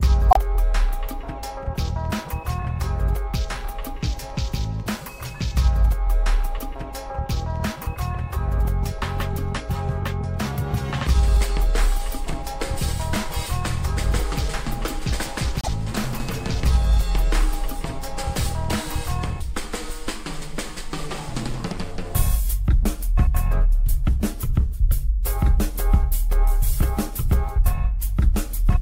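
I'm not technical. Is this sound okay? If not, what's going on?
No. The audio has repeated frames: at 0.30 s a fragment of about 26 ms plays twice, and at 15.61 s a fragment of about 52 ms does the same. The compressed data was evidently written or sent twice there, giving brief stutters and lengthening the clip.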